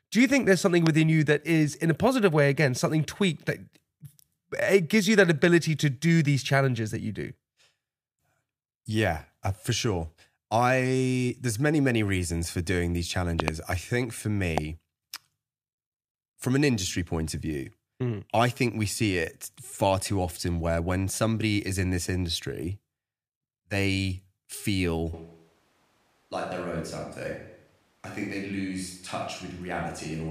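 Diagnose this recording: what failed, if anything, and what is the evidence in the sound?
Four loud pops sit on top of the speech, which carries on underneath: a single one at 0.87 s, a quick double between 13.40 and 13.50 s, and another single at 14.58 s, each well above the speech level. That's a voltage pulse in the analogue wiring, likely a loose plug or static discharge.

At 25.1 s the recording switches to a distant microphone and stays there to the end. The speech turns hollow and roomy, drops by about 5 dB, and the room noise comes up underneath it. The likely cause is that the close mic's feed dropped out and a camera mic took over.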